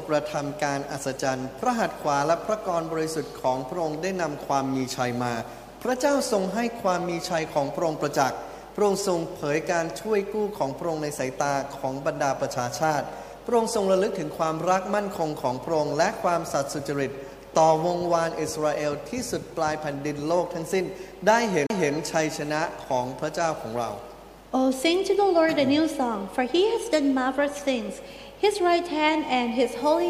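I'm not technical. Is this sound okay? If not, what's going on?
No. Around 21.66 to 21.70 s there's a tiny gap and the sound jumps. That's a CD skip: the player's laser leapt to another part of the disc.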